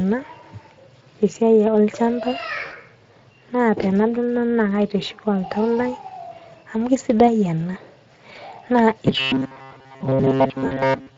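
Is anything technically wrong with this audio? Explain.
Yes, three problems are audible.

Throughout the clip, the speech sounds hoarse and grainy, with a noisy quality and a fizzy, noise-like top end instead of clean high frequencies. This is Speex codec damage, and it is plainly audible. Speex is a CELP codec that models the voice as a filter driven by an excitation signal. At this setting there are too few bits to encode the excitation accurately, which fits a bitrate of around 20 kbps.

At 2.65–2.74 s, 8.33–8.39 s and 10.67–10.83 s, the voice briefly smears into a buzzy tone or coloured noise that fades, and then sounds weak before recovering. This is VoIP packet loss concealed by the speech codec. About 60 ms, 20 ms and 40 ms of audio respectively never arrived, so the decoder kept extrapolating from its last pitch and filter settings at lowered gain. Because each decoded frame depends on the previous one, the damage lingers briefly after real data returns.

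From 9.06 s to the end at 11.17 s, the voice turns into a rigid, metallic buzz locked at about 134 Hz that still roughly tracks the speech. This is robotic sound from repeated short buffers. Most of the real audio in this stretch appears to be skipped and replaced by repeats of a very short chunk. A 134 Hz buzz corresponds to a repeat of about 7.5 ms, so the likely cause is audio arriving too seldom and the playback side looping its last buffer to fill the gaps.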